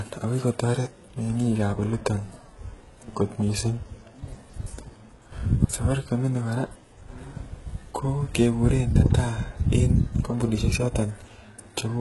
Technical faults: HE-AAC compression

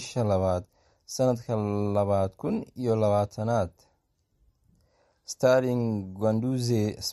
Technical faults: MP3 compression

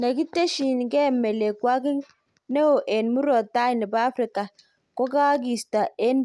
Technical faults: none

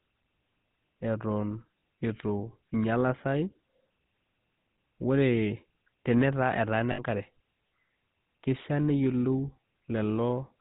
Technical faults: GSM full-rate codec; lost GSM frames

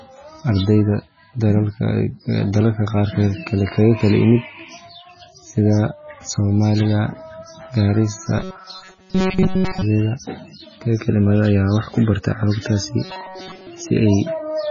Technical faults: MP3 compression; robotic sound from repeated short buffers

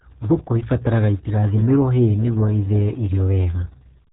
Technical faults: RealAudio 14.4 codec

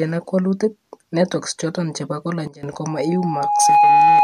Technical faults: sudden gain jump; loudspeaker feedback squeal

